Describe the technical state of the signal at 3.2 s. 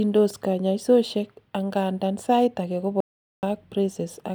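At 3.2 s the speech has vanished into dead silence with no room tone beneath it. It cuts off abruptly at 3.00 s and resumes mid-flow at 3.43 s, leaving a gap of about 0.43 s in which whatever was being said is simply missing. This is an audio dropout to silence, likely caused by the input feed being lost for that moment while the recorder kept writing silence in its place.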